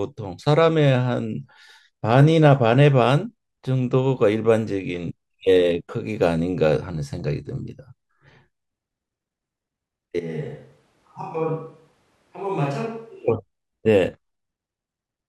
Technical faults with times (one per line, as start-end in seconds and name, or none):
10.20-13.28 switch to a distant microphone